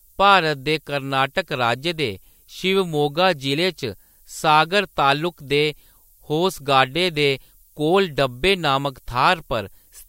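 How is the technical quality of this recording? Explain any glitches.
The recording is marred by a constant hiss. Through the whole speech clip runs a thin, steady hiss that grows brighter toward the top of the band, sitting about 30 dB below the speech. This is low bit depth with noise shaping, which fits a 10-bit signal: rounding to so few levels creates error, and feedback pushes that error upward in frequency, where it is heard as a hiss.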